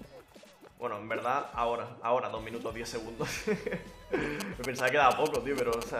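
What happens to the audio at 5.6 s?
GSM signalling bursts are sounding at 5.6 s, part of a run that lasts from 4.40 to 5.83 s. A nearby 2G phone exchanging short signalling traffic with its network sends clumps of radio pulses, and the audio circuitry rectifies them into an audible signal. The result is a galloping dit-dit-dit of brief 217 Hz buzzes, sitting only a little below the level of the wanted sound.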